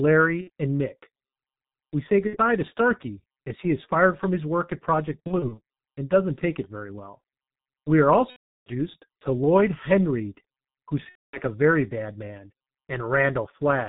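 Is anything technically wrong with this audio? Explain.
Yes. Throughout, the speech carries heavy G.723.1 codec damage at about 6.3 kbit/s. Nothing above 4 kHz survives, and the voice model updates only every 30 ms frame. The voice sounds muffled and hoarse. Consonants smear together.

VoIP packet loss concealed by the speech codec occurs five times. The gaps are at 0.41–0.50 s, 2.27–2.38 s, 5.27–5.60 s just before "and doesn't take it", 8.30–8.72 s, and 11.09–11.40 s just before "a very bad man". The decoder repeats its last pitch and filter with falling gain. So the sound stretches into a fading buzzy tone or coloured noise. At 5.3 s it comes as brief scattered dropouts. The longest gap, at 8.3 s, loses 12 frames, 360 ms.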